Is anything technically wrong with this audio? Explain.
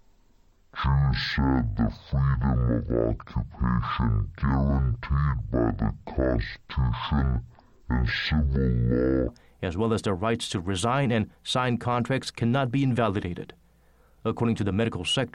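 Yes. From 0.0 to 9.28 s, a stereo-read-as-mono fault: interleaved left and right samples are taken as one channel, so the speech plays at half speed and an octave low, with a faint mirrored copy high in the spectrum, until "as well as their".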